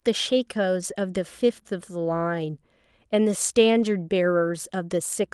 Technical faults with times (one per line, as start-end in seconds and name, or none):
3.79-3.81 lost packet rebuilt from error correction